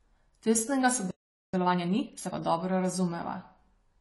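From the start the speech is dull and smeared, with a fizzy, warbling edge on sibilants and nothing above 11.5 kHz. This is likely AAC compression. The narrowed band and coarse spectral quantisation fit AAC-LC at a low bitrate, around 32 kbps.

At 1.11 s the audio cuts out mid-flow and stays silent for about 0.43 s, to 1.54 s. This is a playback stall, likely caused by the player running short of data or being blocked.

From 1.54 s to 2.38 s the speech runs at 1.5 times normal speed with its pitch unchanged. This is time-compressed catch-up. The player trims small pieces and cross-fades across the gaps to clear its backlog, which leaves the passage hurried.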